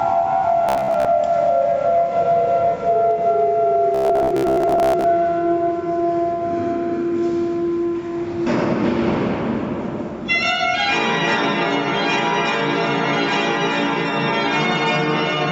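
Right from the start there's gain pumping running through the whole clip. The level swings by roughly 15 dB. Loud and quiet parts end up squashed close together. The likely cause is input gain set way too hot, with a fast limiter or compressor clamping down on every peak and releasing in between.

At 0.69 to 1.06 s and again at 3.95 to 5.04 s you get the robotic sound from repeated short buffers: a stiff, metallic buzz sitting at about 66.8 Hz that only loosely tracks the sound underneath. That pitch means a chunk of roughly 15 ms is being replayed over and over, likely because new audio wasn't arriving in time. It fills most of the first stretch and about half of the second, and the real audio in those gaps is simply skipped. The call path's top end stops at 8 kHz, so everything sounds a bit dull too.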